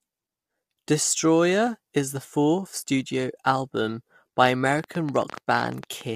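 Low-delay AAC compression runs through the whole clip, and its damage is plainly audible: the speech sounds rough and grainy, with noise filling the gaps between the pitch harmonics and a thin, synthetic-sounding top band. The likely cause is a low-delay codec of the AAC-ELD kind, whose very short frames cannot resolve the voice's harmonics finely and spend bits inefficiently. The coarseness points to a bitrate of roughly 32 kbps, too little for these short frames.

A train of clicks runs from 4.79 to 6.02 s: about fifteen sharp ticks at an uneven pace averaging 11.5 per second, each of much the same shape and peaking around 10 dB above the speech. They sit on top of the voice as a crackling, popping patter and stay audible in any gaps. Something outside the signal is injecting repeated pulses, likewise pointing to electrical interference or a faulty connection or power supply.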